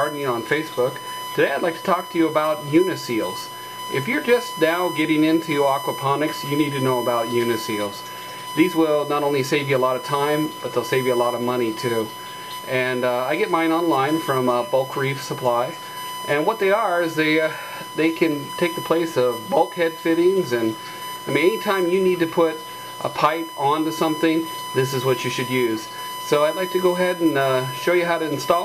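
A USB whine runs through the whole recording: current drawn by the USB bus in regular 1 ms frames is leaking into the audio path through shared power or ground, and that periodic draw is heard as a steady whine at 1 kHz. The tone holds a fixed pitch from start to finish, sitting only about 10 dB below the wanted audio, so it is plainly audible under everything.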